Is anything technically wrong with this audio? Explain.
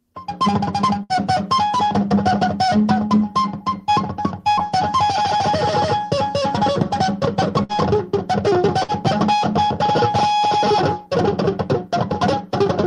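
Yes. A burst of packet loss occurs at 1.03, 4.52, 7.63 and 8.83 s. Each time, about 55 to 60 ms of audio fails to arrive, so the receiver stretches the last sound and fades it out, then playback resumes with roughly 60 ms skipped.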